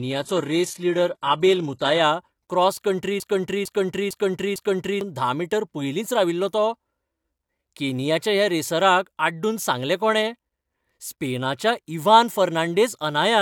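From 0.0 to 2.0 s, the speech shows an adaptive stream starting at a low bitrate. The player began on a cheap version of the stream to start fast. The treble sounds thin and synthetic, with nothing above about 12.3 kHz. Codec artefacts are stronger. The sound points to a low-rate HE-AAC start near 16 kbit/s. At 2.0 s, just before "क्रॉस कण्ट्री", quality jumps up with no gap. It fits a step to AAC-LC around 96 kbit/s.

From 3.2 to 5.01 s, just after "क्रॉस कण्ट्री", a broken-record loop takes over. A 0.45 s fragment repeats exactly, back to back, four times. The repeats are seamless and mechanical. Whatever speech belonged in that stretch is gone. The likely cause is a stall in the player, encoder or stream. It kept resending the last fragment it held until data flowed again.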